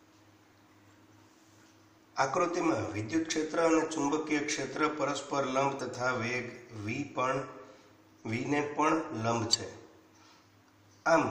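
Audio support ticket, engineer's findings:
Damaged data in a compressed stream at 3.31–3.33 s, 5.79 s and 9.53–9.55 s. Three brief blips, each about 10 to 20 ms. Probable component is the compressed file or stream upstream of the decoder. At each point, corrupted or missing bytes make the decoder misread or reject frames and lose sync. It then hunts for the next valid frame header, and the audio glitches briefly before playback resumes.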